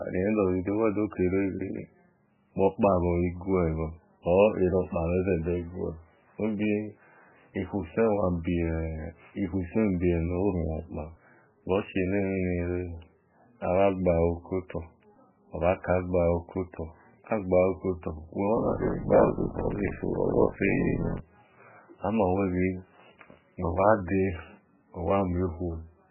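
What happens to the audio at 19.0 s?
At 19.0 s the speech is inside a stretch of buffer tearing that runs from 18.56 to 21.21 s. The program filling the ring buffer and the hardware reading it have drifted out of step, so they cross within each period. Roughly 40 percent of every buffer replays audio from about 40 ms earlier, with abrupt joins at both edges. This produces a robotic buzz at 50 Hz, the buffer rate, that persists only while sound is present.

Underneath, and through the whole clip, there is heavy damage that is likely MP3 compression at a very low bitrate, around 8 kbps. Starved of bits, the encoder drops weak frequency lines that flicker in and out from frame to frame, and nothing remains above 3 kHz. The speech therefore sounds watery and swirly, dull and band-limited, with smeared onsets and metallic chirping on s sounds.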